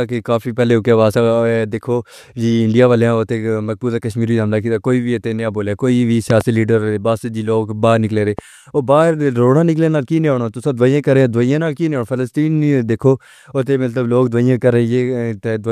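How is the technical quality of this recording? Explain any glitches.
The recording has two loud pops on top of the speech. The first comes at 6.30–6.43 s, after "اتنا بولا کوئی بھی" and before "لیدر باس جی". It is two sharp pops in quick succession. The second is a single pop at 8.39–8.41 s, just after "باہر نکلے ہوئے". Each rises around 10 dB above the speech. The likely cause is a sudden voltage pulse, from a plug, switch, static or driver glitch. The speech carries on underneath.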